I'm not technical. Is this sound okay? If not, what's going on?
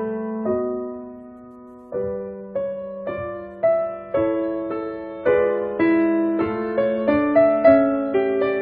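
Yes, this music sounds fine. Nothing goes wrong with it at any point, so there is nothing here that needs fixing.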